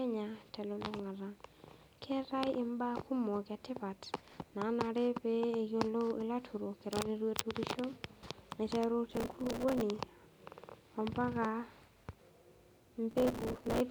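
Processor overload crackle occurs at 4.18 to 4.50 s, 9.11 to 9.81 s and 13.11 to 13.80 s. Buffers of a few milliseconds, dozens to around a hundred per burst, miss their deadlines and replay stale audio with hard edges, giving gritty tearing over the speech.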